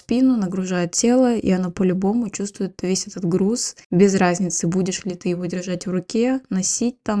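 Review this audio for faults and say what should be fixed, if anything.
No faults can be heard in this speech clip. Nothing needs to be fixed.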